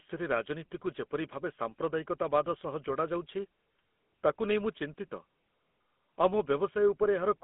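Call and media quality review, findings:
GSM full-rate codec damage throughout. Speech band-limited to about 200 Hz–3.4 kHz. Plainly buzzy, gravelly texture from pulse-driven excitation, consistent with a 13 kbps GSM full-rate link.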